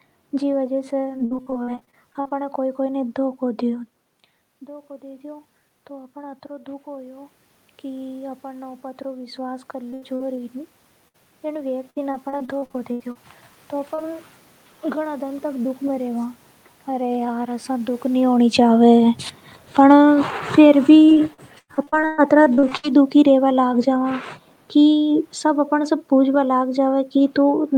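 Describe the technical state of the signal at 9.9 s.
Repeated packet loss from 9.91 to 10.41 s: several packets went missing in quick succession, the longest gap 78 ms, and each hole was patched by extending the previous sound, giving choppy, robotic audio. Throughout, automatic gain rising (4.59 to 15.70 s) is raising gain by about 14 dB after the input dropped about 16 dB, so voice and background swell together.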